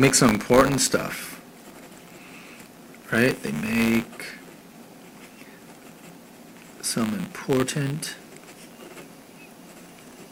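Buffer tearing runs through the whole clip: writer and reader of the ring buffer have slipped, so a small sliver of each 10 ms period replays audio about 20 ms old. The result is a steady 100 Hz rattle heard wherever sound is present. A waveform shows hard discontinuities every 10 ms, and a spectrogram shows matching vertical striations.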